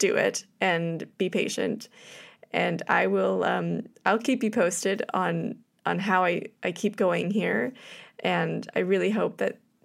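Nothing in this recording trips any alarm, with no faults turning up anywhere along the way.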